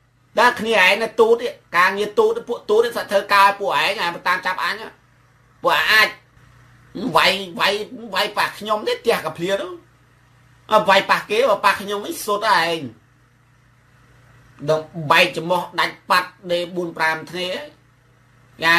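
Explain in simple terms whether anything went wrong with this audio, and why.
Something did go wrong, but only for a blink. At about 2.86 s there's a quick DAB burbling blip, a tiny watery blip. It happens when a digital radio signal gets weak and a small trickle of bit errors slips past the error correction into the compressed audio. Wrong values in some of the frequency bands in that stretch then put short blips of noise into them, which is what makes the watery blip. It's brief enough that it fits only a handful of frames being hit.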